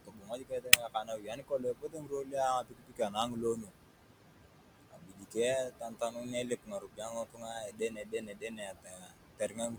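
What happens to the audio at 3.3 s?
At 3.3 s the speech is being cut by the noise suppressor. Between 2.62 and 3.74 s the suppressor mistakes part of the speech for noise and pulls it down along with the background, by as much as about 18 dB. Most of that span is affected. Soft consonants and quiet stretches sound swallowed or faint, as if the sound briefly drops away.

The same moment also carries noise suppressor artifacts, which run through the whole clip. The suppressor lowers the frequency bands it judges to be steady noise, frame by frame, by about 18 dB. Around 3.3 s the background sinks and rises as the suppressor's gain changes.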